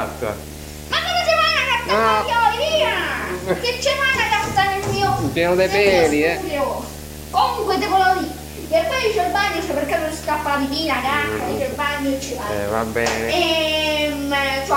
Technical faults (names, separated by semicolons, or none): video or display buzz